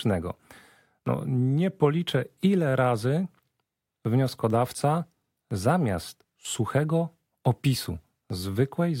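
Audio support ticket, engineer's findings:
Drift correction step, 1.27 to 1.91 s. Speech slows about 5% and drops 94 cents in pitch together, roughly a semitone flat, then snaps back. Likely cause: clock-sync resampler stepping playback rate once to refill its buffer.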